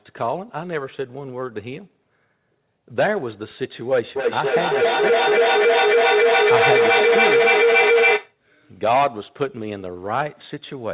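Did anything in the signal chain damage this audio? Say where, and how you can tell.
Yes. Feedback howl, 4.16 to 8.39 s, acoustic loop between devices: a tone near 500 Hz, about 6 dB above the speech, with the loop repeating roughly every 300 ms as each pass gained level.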